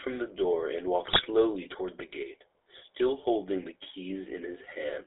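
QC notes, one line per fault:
Throughout: GSM full-rate codec. The speech has the buzzy, gravelly roughness of first-generation GSM coding. The vocal tract is modelled as a filter excited by a regular pulse train that keeps only one excitation sample in three, so fine detail turns to grit. The band runs from about 300 Hz to 3.6 kHz, with nothing above, which fits a 13 kbps full-rate link. The damage is plainly audible.
1.08 to 1.25 s: GSM bit errors. For about 0.17 s the speech breaks into squawks, pops and gargling. Corrupted bits are reaching the decoder, so the filter, pitch and gain values for each affected frame come out wrong. The spectrum bends and the level jumps from frame to frame. The burst is dense enough to hit what sounds like around eight consecutive frames, which fits a weak radio link.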